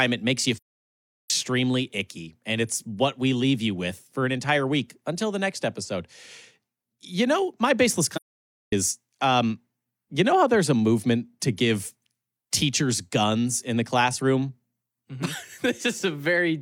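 At 0.54 to 1.30 s and again at 8.13 to 8.73 s, the speech drops into silence: AAC frame loss with muting. The decoder zeroed the missing frames, so the overlapping windows fade it out and back softly, leaving soft-edged holes.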